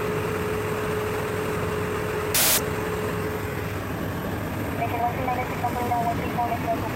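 A wrong sample width fault runs from 2.35 to 2.58 s. The sound points to 16-bit data being read as packed 24-bit samples, so values straddle mismatched bytes. The result is a burst of loud noise with the real signal buried inside, playing 1.5 times too fast and high.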